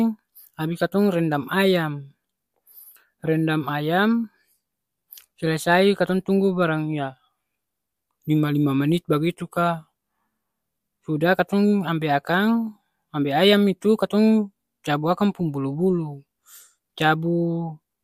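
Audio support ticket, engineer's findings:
No faults found on the speech clip. Nothing to escalate; closing ticket.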